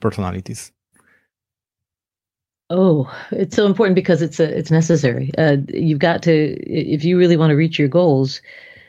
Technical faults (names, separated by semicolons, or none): short stall from a late packet